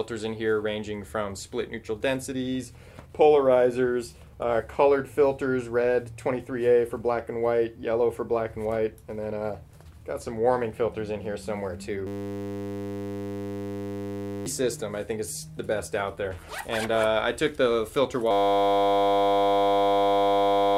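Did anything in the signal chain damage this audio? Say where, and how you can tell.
Yes. From 12.07 to 14.46 s, and again from 18.31 s to the end, the sound becomes a steady 100 Hz buzz: a system hang loop at the driver or buffer stage. The system froze while the hardware kept replaying one 10 ms buffer, losing roughly two and three seconds of audio.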